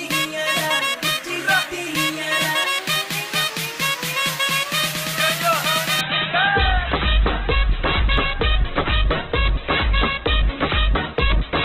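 At 6.01 s the audio switches abruptly to an adaptive stream at a lower bitrate and stays there to the end at 11.65 s. The connection could no longer sustain the higher-quality version, so playback moved to a far leaner encoding, consistent with a drop from about 64 kbit/s to 8 kbit/s Opus. The treble vanishes and the sound turns thin and muffled. On a spectrogram the upper band cuts off sharply at 6.01 s, while the waveform continues with no gap.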